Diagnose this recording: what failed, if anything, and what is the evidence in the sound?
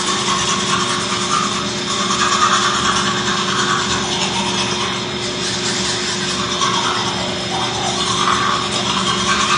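The codec stage is the likely culprit: AAC compression throughout the clip. Nothing sounds above 9.8 kHz, and the damage is plainly audible as a dull, smeared quality, which fits AAC-LC at around 32 kbps. A simple low-pass filter would cut the top cleanly without smearing what remains.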